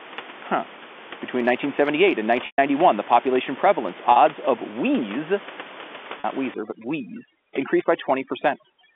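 Speech over a telephone line, with room noise about 17 dB below the voice and a band of roughly 250 Hz to 3.5 kHz. Packet loss with pitch repetition occurs at 2.46 s (120 ms, which fits six 20 ms packets), 4.12 s and 6.20 s (40 ms each). The receiver repeats the last pitch period, which shows as flat harmonic stripes that fade out in the longer gap. From 6.54 s to the end, overdone noise removal breaks the background into twinkling specks, which appear as a holed, speckled floor on a spectrogram.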